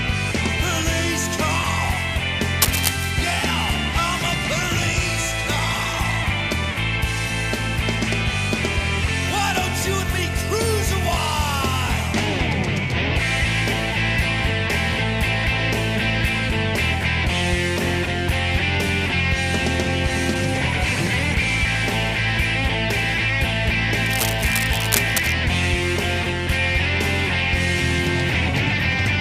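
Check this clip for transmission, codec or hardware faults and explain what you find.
Two bursts of cable scratch noise occur, from 2.62 to 3.11 s and 24.06 to 25.34 s. The rustling is roughly as loud as the signal at first, then somewhat quieter. The likely cause is a worn connector whose contact resistance fluctuated as it moved.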